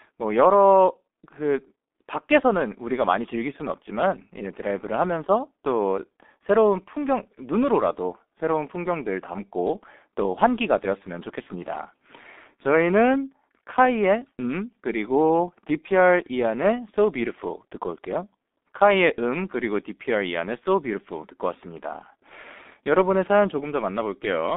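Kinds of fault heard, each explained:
G.723.1 codec: the speech passes through a low-rate telephony codec, which fits about 6.3 kbit/s, and only a band from 250 Hz to 3.6 kHz survives. The sound is muffled and hoarse throughout, with heavily blurred consonants.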